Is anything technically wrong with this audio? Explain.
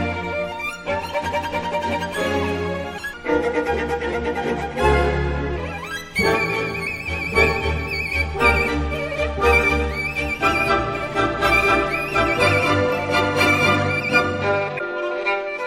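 Yes. There are two kinds of fault. Damaged data in a compressed stream appears at 2.97–3.00 s and 14.75–14.81 s. Corrupt frames make the decoder lose sync, giving a brief chirp, squawk, click or short hole. A section at the wrong speed runs from 3.14 to 5.58 s. It plays at 0.85 times speed, about three semitones low, sounding deeper and slower. It was likely fitted to the wrong clock.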